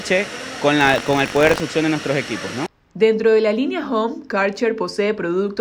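Buffer tearing from 0.79 to 1.6 s: write and read positions cross each period, splicing in a small slice of audio about 70 ms old, giving a 46.9 Hz rattle that fits a 1024-sample buffer.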